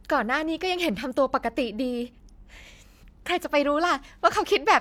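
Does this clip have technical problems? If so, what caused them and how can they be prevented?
No, there are no technical problems in this clip.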